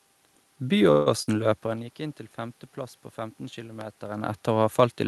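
Speech over a call link, with the top end rolling off around 12 kHz, consistent with Opus at about 32 kbps, plus some room noise and the talker shifting distance near 1.5 and 4 s. From 0.91 to 1.08 s there's a call audio freeze, likely packets stalling so the jitter buffer ran dry: the last sound is stretched into a fading buzz or hiss for about 150 ms, then speech picks up where it left off with nothing lost. Right after, at 1.22 to 1.29 s, a burst of packet loss leaves a short fading fill of roughly 47 ms, and about 40 ms of speech is gone when it resumes. At 3.81 to 3.83 s a single loud pop sits on top of the speech, around 15 dB above it, probably a voltage spike from a plug, switch or driver glitch.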